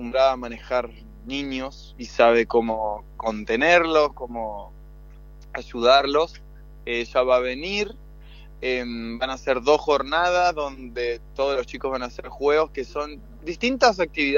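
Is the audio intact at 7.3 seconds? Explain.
Yes, the audio is intact at 7.3 seconds, with no dropout, click, distortion or other fault audible at that point.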